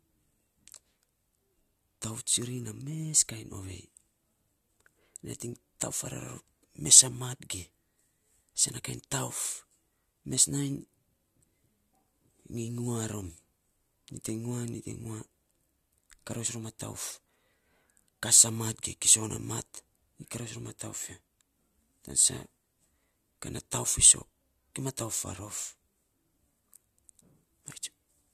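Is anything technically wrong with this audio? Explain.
No, the speech recording has no audible technical faults at any point.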